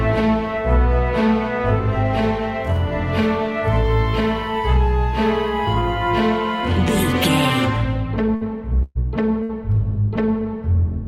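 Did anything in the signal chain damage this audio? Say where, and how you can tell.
Yes. The damage happens in the network stage, as three bursts of packet loss late in the clip: 8.35 to 8.44 s, 8.83 to 8.98 s, and 9.43 to 9.52 s. In each, the receiver's concealment carries the last sound forward and fades it down. The result is a held buzz or a dying hiss, not the real audio. About 60 ms goes missing in the first and third gaps and about 120 ms in the second. The second briefly drops to silence before the sound resumes further on.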